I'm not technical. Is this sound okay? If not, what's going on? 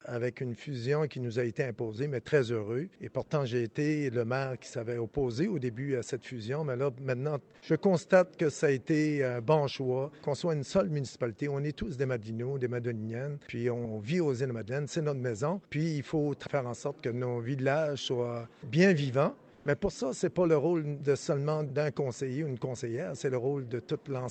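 No. At about 19.53 to 19.65 seconds, for roughly a tenth of a second, the natural background briefly turns into a smooth, even hiss with no detail, at almost the same loudness. This is comfort noise in place of the background. The likely cause is the call system pausing transmission when it judged nothing important was there, so the receiving end filled the gap with invented filler noise until real sound resumed.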